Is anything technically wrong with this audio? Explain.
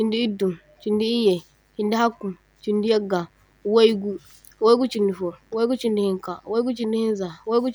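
Yes. Mains buzz runs through the whole clip: switching spikes from a dimmer, rectifier or unshielded cable entered the signal path twice per 50 Hz cycle, spreading harmonics into the kilohertz range. The result is a steady, raspy buzz sitting faintly beneath the speech, roughly 40 dB down.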